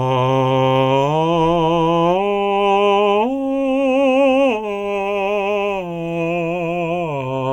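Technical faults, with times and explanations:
No technical faults can be heard in this music clip.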